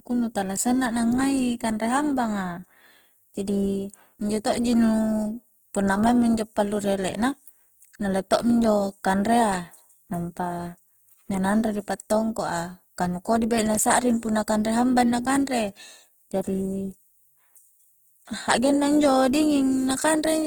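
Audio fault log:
throughout, Opus compression: the speech sounds rough and grainy, with noisy, hissy texture replacing clean tonal detail, though the band stays wide up to about 20.1 kHz. This is likely Opus music-mode coding at a low rate, around 16 kbps, filling starved bands with folded or noise content.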